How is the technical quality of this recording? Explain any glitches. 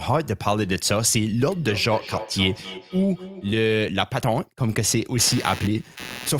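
The recording has two clear glitches: an echo loop in the first half and electrical noise near the end.

From 1.48 to 3.66 s there is feedback echo between two devices. A second device in the same room plays back this microphone's signal, and the microphone picks it up again. The local echo canceller only removes its own playback, so the copy gets through. Each phrase returns about every 300 ms as a thinner, ringing copy, peaking about 14 dB below the speech. On a spectrogram, each burst of speech is followed by fainter duplicates spaced at that interval. The waveform shows a smeared tail after each burst instead of clean gaps.

From 5.19 s to the end of the clip there is computer activity noise. Load changes in the processor, graphics card or mouse shift the audio circuit's shared ground, and those shifts leak into the signal. It is heard as a buzzy chirping at a pulse rate of around 150 Hz, about 15 dB below the speech, and it does not follow the speech. 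A spectrogram shows evenly spaced harmonic lines or regular vertical ticks across the band. The waveform carries a fine, regular ripple that persists between syllables.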